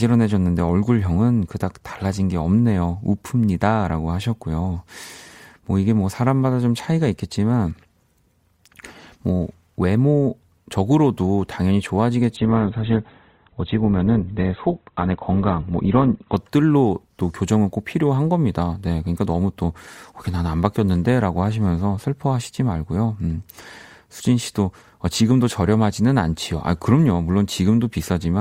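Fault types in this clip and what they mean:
Adaptive stream at a lower bitrate: the player switched to a lower-quality version of the stream for a stretch, here from 12.36 s to 16.36 s. Over those 4 seconds the speech turns dull, with nothing above 4.2 kHz and more codec artefacts. The sound fits a step down from around 64 kbit/s Opus to about 12 kbit/s. The change is abrupt at both ends, with no gap in the audio.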